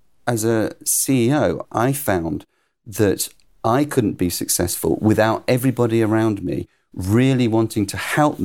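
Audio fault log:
Nothing to flag here, as this bit of speech comes through without any fault worth logging.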